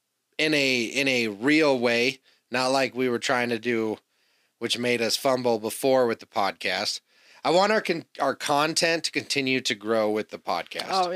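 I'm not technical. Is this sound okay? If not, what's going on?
Yes, this sound is okay, with nothing going on that needs fixing.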